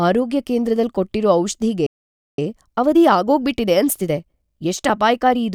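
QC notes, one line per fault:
1.86–2.38 s, playback stall: The speech cuts off mid-flow and the output goes silent for about 0.52 s. It then carries on. The likely cause is the player running out of buffered data or its thread being blocked until it recovered.
2.38–5.38 s, time-compressed catch-up: After the gap the speech runs hurried, at about 1.15 times normal speed. The pitch stays normal. The player trims small pieces and cross-fades the joins to clear its backlog.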